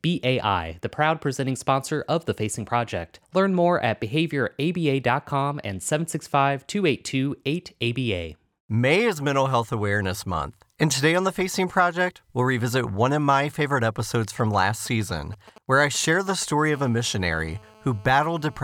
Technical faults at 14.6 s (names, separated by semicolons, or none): GSM signalling bursts